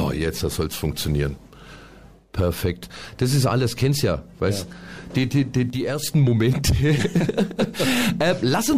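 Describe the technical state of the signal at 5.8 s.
One channel drops out from 5.70 to 6.03 s: losing one stereo side likely halves the shared content after mono summing, so the sound abruptly falls about 6 dB.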